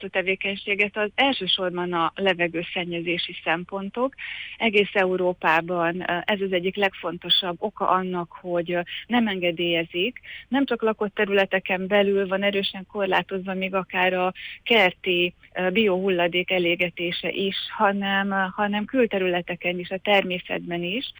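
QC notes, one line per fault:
5.17–21.19 s, imaging from linear upsampling: from 5.17 s to the end the top of the band turns dull, and a faint metallic shimmer rides on the brightest, hissiest parts of the sound. The sample rate was likely raised by joining samples with straight lines, which points to a source near 22 kHz brought up to 44.1 kHz. That crude interpolation rolls off the highs and leaves a mirrored spectrum image between 11.03 kHz and 22.05 kHz, some 35 dB down.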